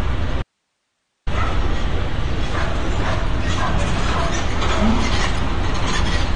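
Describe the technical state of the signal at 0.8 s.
At 0.8 s the signal is gone: from 0.42 s to 1.27 s, a span of about 0.84 s, the sound drops abruptly to a faint bed of hiss sitting roughly 55 dB below the normal level, then returns just as suddenly. This is an audio dropout to a faint residue. The wanted signal was likely lost upstream while the rest of the chain stayed live, so only the open path's noise floor comes through the gap.

Whatever can be heard around that gap, and the residue itself, carries AAC compression damage that is plainly audible: the top end stops dead near 9.7 kHz, leaving a dull, smeared quality with a fizzy, warbling edge on anything sustained. That is the signature of AAC-LC quantising its frequency lines too coarsely, likely at a rate around 32 kbps, discarding and thinning high bands to fit the budget.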